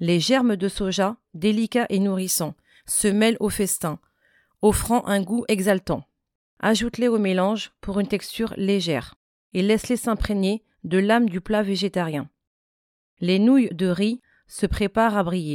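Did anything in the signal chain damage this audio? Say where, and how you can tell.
Yes: pre-emphasis left on, 2.19 to 5.70 s. An FM 50 µs treble boost went uncorrected by de-emphasis, so the speech turns thin and sibilant, about 11 dB hot at 10 kHz.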